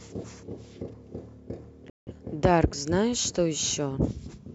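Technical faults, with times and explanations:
1.90 to 2.12 s, digital broadcast dropout: the speech cuts abruptly to silence and then resumes further on, with about 170 ms of programme simply gone. The receiver muted after frames failed or went missing, which fits a loss of four frames.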